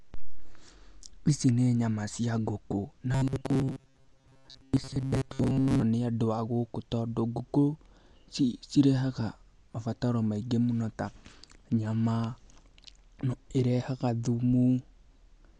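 Throughout the speech, likely Dolby Digital compression at a low bitrate around 64 kbps strips everything above 11.4 kHz, leaving the sound dull with rough, fluttering noise.

From 3.12 to 5.82 s, between "nyama cia ngũkũ na" and "nĩ andũ a gũkũ", audio likely arrives too seldom and short buffers repeat, creating robotic sound from repeated short buffers. Most of the passage is replaced by a rigid, metallic 134 Hz buzz, which fits a buffer about 7.5 ms long.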